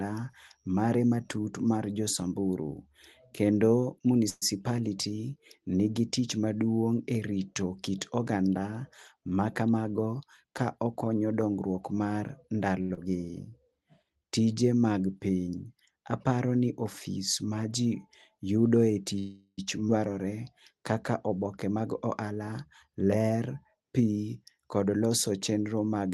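At 4.29 s the likely cause is that packets were held up in transit and the jitter buffer ran dry, producing a call audio freeze. The receiver kept extending the last sound for about 122 ms, until 4.44 s. It turns into a fading buzz or hiss and ends in roughly 10 ms of near-silence. When the packets arrive, the speech resumes where it stopped, so nothing is lost, but a gap has been inserted and the whole stream now runs later.

From 9.63 to 10.51 s there is a jitter buffer speed-up. The buffer had built up more audio than its target, so the receiver trimmed out many short slices a pitch period or so long, removing about a tenth of a second in total. Playback runs at about 112% of normal speed with the pitch unchanged, which makes the speech sound hurried.

At 12.82 s a packet was late and the buffer emptied briefly, causing a short stall from a late packet. The receiver held the current sound for 75 ms until the data arrived at 12.92 s, then continued from the same place. 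Nothing is missing, but one sound is drawn out too long, with a faint buzzy dip.

Right after, at 12.94 s, comes a short concealed packet loss. About 60 ms of audio never reached the decoder in time. The receiver filled the hole with 33 ms of continued sound and blended back into real audio by 12.99 s. The result is a quick smear or wobble, and a brief sound inside that span can drop out entirely.

From 13.26 to 13.73 s the buffer was running low or rebuilding its reserve, so the receiver inserted a jitter buffer slow-down. It repeated single pitch periods to add 36 ms, which slows playback to about 94% with the pitch unchanged. Sounds become slightly stretched and can take on a faint warble.

At 19.19 s there is a longer call audio freeze, this time lasting 388 ms, until 19.59 s. The last sound is extended into a fading buzz or hiss that decays into about 40 ms of quiet, then the speech picks up intact from where it left off.

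At 19.87 s the playback jumps in a skip ahead. Later audio was already queued, so a stretch of about a fifth of a second was dropped to catch up. The two sides are joined with only a 10 ms bridge, which leaves an abrupt seam where part of the speech simply vanishes.

From 21.66 to 23.81 s a second jitter buffer speed-up removes about a fifth of a second by cutting many pitch-length pieces. Speech runs at about 108% of normal speed with its pitch kept, so this passage sounds slightly rushed. Throughout the clip, the Opus call path's bandwidth, limited to 12 kHz, leaves the top end softened.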